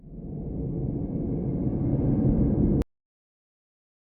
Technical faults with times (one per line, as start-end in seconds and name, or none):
2.82-4.05 cut-off end